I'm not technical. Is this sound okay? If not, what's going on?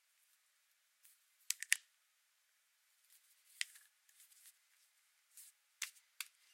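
Yes, no faults are audible.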